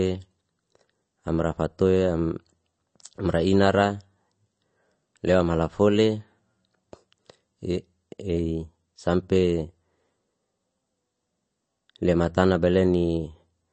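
Throughout the speech, nothing is present above 8.3 kHz, and plainly audible swirly, watery artefacts colour the sibilants and smear consonant attacks. The likely cause is MP3 compression at a low bitrate, around 32 kbps, forcing a fixed treble cut and dropping weak spectral lines frame by frame.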